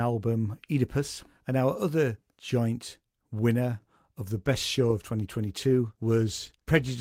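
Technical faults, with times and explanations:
4.38–7.01 s, call bitrate drop: right after "joint winner of the", the audio turns rougher and watery and stays that way to the end, about 2.6 s in all. The bandwidth estimate has clearly sagged and the encoder has been told to squeeze into far fewer bits, so detail gets coded much more coarsely. It sounds like a step from roughly 48 kbps down to around 18 kbps, and it never climbs back before the clip ends.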